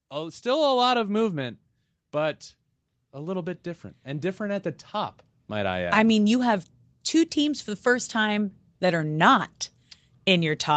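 Automatic gain rising occurs twice in this speech recording: the call's gain control judged the input too quiet and lifted its gain step by step, by about 7 dB from 0.11 to 1.57 s and by about 8 dB from 3.11 to 6.01 s, leading into "mean you have two". Voice and background noise swell together over each span, so the level creeps upward rather than jumping, while the call microphone processing normally takes out only the lowest bass.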